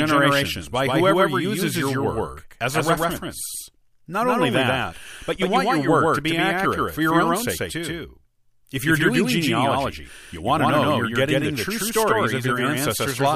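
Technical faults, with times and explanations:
Throughout, doubled audio track: every syllable of the speech is followed by a second, full-band copy arriving roughly 150 ms later at about the same loudness, so consonants stutter and the speech sounds smeared. This is likely the signal being captured twice, once through a slower path. Unlike room echo or reverb, the copy repeats only once, with no decay tail and no change in tone. It is an exact duplicate rather than a reflection.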